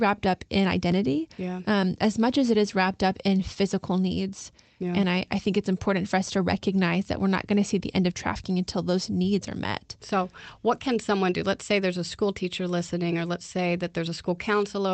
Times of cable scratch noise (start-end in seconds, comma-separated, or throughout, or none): none